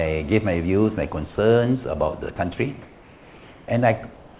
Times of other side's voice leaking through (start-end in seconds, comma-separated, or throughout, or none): none